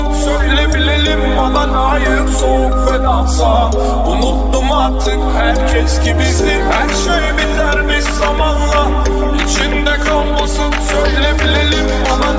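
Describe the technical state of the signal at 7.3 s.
At 7.3 s the signal is intact, with no audible dropout, distortion or other technical fault at that point.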